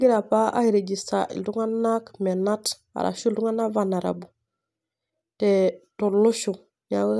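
No technical faults occur at any point in the recording, so there is nothing to describe in time order.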